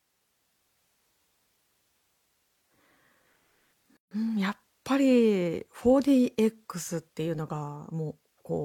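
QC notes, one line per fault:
3.97 to 4.11 s, gap at a join of encoded pieces: the speech drops out for 144 ms with smeared edges, where separately encoded chunks were joined untrimmed.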